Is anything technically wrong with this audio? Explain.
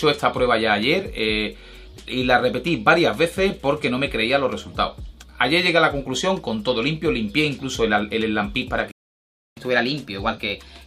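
Yes, two related problems near the end.

First, a playback stall from 8.91 to 9.57 s. The sound just cuts out mid-flow and sits silent for about 0.65 s before resuming. That's most likely the player running dry on data or its thread getting blocked for a moment, so nothing reaches the output until it recovers. It's a clear dead gap, not a fade, and it's easy to spot.

Right after that, from 9.57 s to the end, there's catch-up at higher speed. Having fallen behind during the stall, the player resamples its backlog to play it 1.1 times faster and win the lost time back. Because it's resampling rather than time-stretching, pitch rises along with speed, by roughly a semitone and a half. You hear everything run slightly quick and a bit sharp, and it stays that way until the clip ends.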